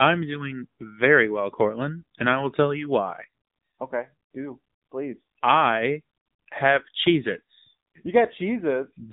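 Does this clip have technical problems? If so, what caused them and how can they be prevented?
Yes. The speech runs through an AMR narrowband mobile codec for the whole clip, and the damage is plainly audible. The voice is confined below 4 kHz, and it sounds buzzy and synthetic because each frame is rebuilt from a simple vocal-tract model excited by a few pulses, which fits a low mode near 8 kbps. A spectrogram would show a flat ceiling at 4 kHz with nothing above it. Prevention means recording directly or using a wideband codec at a higher bitrate instead of a narrowband mobile call path.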